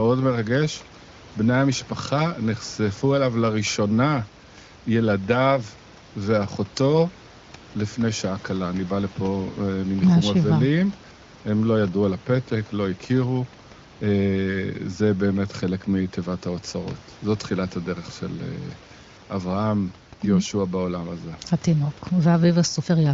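No faults: the room noise sits about 23 dB below the speech, and the band ends near 7.5 kHz with the clear sound of AMR wideband (HD Voice) coding at a high rate, which fits roughly 23 kbit/s.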